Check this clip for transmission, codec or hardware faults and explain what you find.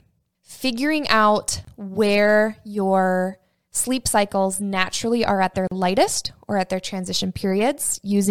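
Two brief dropouts break the speech: a 25 ms hole at 1.65 to 1.67 s, between "figuring out" and "where your sleep cycles", and a 40 ms one at 5.67 to 5.71 s, between "naturally are at their" and "lightest or at their". Each is a gap at a join of encoded pieces. The sound stops with softened edges, then resumes exactly where it left off, because separately encoded segments, roughly 4 s apart, kept their encoder start delay and final-frame padding when spliced.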